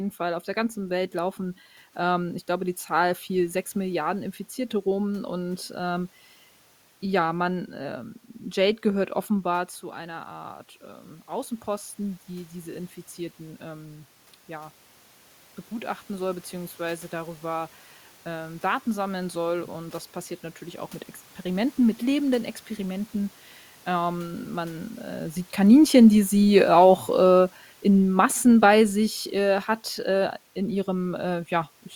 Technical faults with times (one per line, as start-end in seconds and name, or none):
25.84-30.36 automatic gain falling